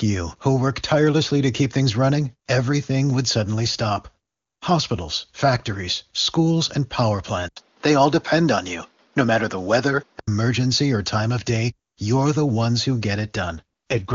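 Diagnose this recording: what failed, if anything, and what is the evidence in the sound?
Capture stage: at 7.48 s an 80 ms gap opens. Until 10.27 s the speech is duller, with nothing above 6.7 kHz and a new hiss roughly 40 dB down, at the same level. A spectrogram shows a blank slice, then a lowered ceiling, likely from an input switched to a poorer device.

Network and codec stage: from 13.56 s to the end, the speech turns rough and synthetic with no gap and no loss of bandwidth. This is an AMR rate drop from 23.85 to 6.6 kbit/s. On a spectrogram the band edge holds but the harmonics blur into grainy noise.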